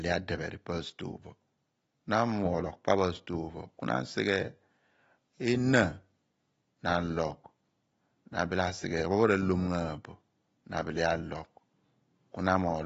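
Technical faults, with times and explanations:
Throughout, AAC compression: nothing above 7.7 kHz, with a smeared, warbling texture a clean low-pass wouldn't add, likely from AAC-LC near 27 kbps.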